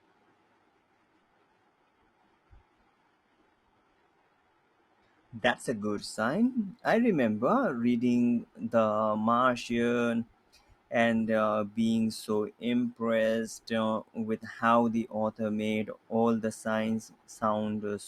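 For the first 6.0 s the speech sounds dull and papery, with thin, synthetic treble and stronger codec smearing. At 6.0 s it abruptly clears, with no gap, to fuller audio extending to 15.3 kHz. This is an adaptive stream starting at a low bitrate: the opening fits HE-AAC near 16 kbit/s, and the later sound fits AAC-LC near 96 kbit/s.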